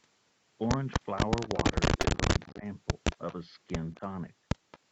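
From 1.43 to 1.57 s a faint, delayed copy of the speech trails it by about 224 ms, some 20 dB down. This is an echo leak, likely from a far-end loudspeaker whose echo canceller let part of the microphone pickup slip back into the call. The same faint echo, a little quieter at about 25 dB below the speech and with the same 224 ms lag, returns from 2.40 to 2.52 s, from 3.11 to 3.34 s and from 4.71 to 4.79 s.

At 2.01 s there is a brief smear lasting about 40 ms. This is short concealed packet loss: roughly 20 ms of audio arrived too late, so the decoder extended the preceding sound to fill the gap before blending back into the real signal.

From 2.51 to 2.64 s the speech sinks sharply, by around 15 dB at its deepest, over roughly 150 ms. This is speech suppressed in double talk. Both ends were likely active at once, and the echo canceller, unable to separate its talker from the returning echo, turned everything down. 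A milder dip of around 5 dB, lasting about 40 ms, follows from 3.93 to 4.02 s.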